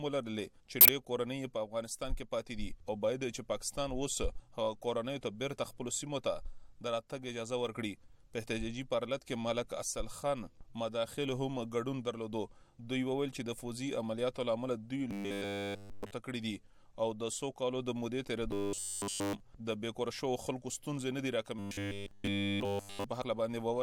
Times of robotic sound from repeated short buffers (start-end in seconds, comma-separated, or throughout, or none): 15.11-16.11, 18.51-19.40, 21.59-23.04